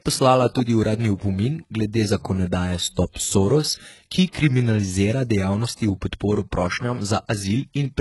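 A speech recording whose treble sounds gritty and lispy, with an empty spectrogram above 11.5 kHz, likely HE-AAC compression at a very low bitrate near 12 kbps, with heavily synthesised upper bands. Pre-echo puts a short hiss ahead of attacks at 4.32–4.35 s and 5.76–5.79 s (after "ki kriminalizira", before "v podporo"), visible as noise smeared about 30 ms and 34 ms before the onsets.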